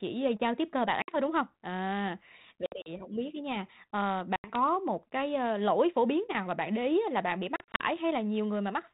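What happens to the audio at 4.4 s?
Packet loss on an ADPCM call strikes from 4.36 to 4.56 s, after "biết ấy nha ờ". About 80 ms, a few packets, becomes hard silence. The decoder's predictor and step size lose sync with the sender, so "một cái ơ lỗi" returns slightly distorted, then settles.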